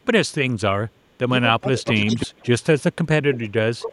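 Echo leak at 0.96 to 1.17 s: a faint copy of the speech returns about 326 ms late, likely because the far end's echo canceller let its loudspeaker pickup through. Speech suppressed in double talk follows at 1.6 to 1.85 s, where the voice dips by about 15 dB, likely because the canceller mistook overlapping talk for echo and turned everything down. The echo leak returns much louder at 1.85 to 2.26 s, with the same 326 ms delay and only about 10 dB below the speech. A brief suppression dip falls inside it at 2.05 to 2.1 s, and a deeper one of about 25 dB follows at 2.26 to 2.46 s. A quieter echo comes back at 2.6 to 2.83 s. From 3.24 s to the end, the voice is pushed down by up to about 30 dB, and a short echo scrap appears at 3.33 to 3.39 s.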